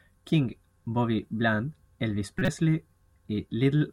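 A corrupt frame decoded in this speech clip from 2.38 to 2.48 s, a loud glitch near -10 dBFS where flipped bits misplace energy across what sounds like three frames.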